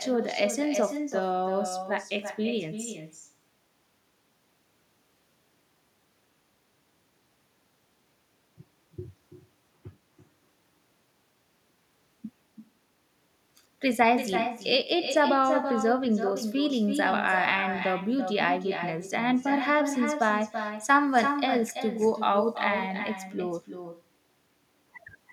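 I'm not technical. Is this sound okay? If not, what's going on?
No. Throughout the recording, every bit of speech is followed about a third of a second later by a fainter, thinner copy. This is echo with no canceller. The person on the other end has the call playing through a loudspeaker, their microphone picks it up again, and nothing strips it out, so the talker's own voice travels back and lands just behind them.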